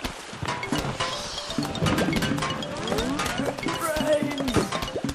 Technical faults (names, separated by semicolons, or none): none